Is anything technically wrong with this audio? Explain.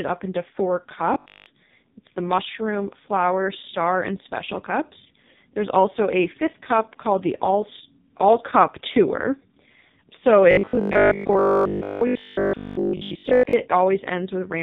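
Yes, there are two problems. The whole speech clip runs through the AMR narrowband mobile codec. Nothing reaches above 4 kHz, and the voice sounds heavily buzzy and synthetic, which points to the lowest-bitrate mode, around 4.75 kbps, where a few pulses per slice drive a crude vocal-tract model.

There is also robotic sound from repeated short buffers, from 1.14 to 1.46 s, right after "up into four", and again from 10.51 to 13.53 s. A rigid metallic buzz at 50 Hz rides over the voice, likely because a 20 ms chunk keeps repeating while most of the real audio is skipped.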